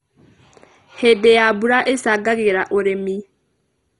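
MP2 compression damage runs through the whole speech clip and is likely the cause of its heavy, dull, gurgling character. Layer II coding divides the signal into 32 sub-bands and shares out too few bits, so upper bands drop out entirely, leaving nothing above 11.2 kHz, while the surviving bands are quantised coarsely and flicker in and out. The granular, watery texture points to a low bitrate around 56 kbps.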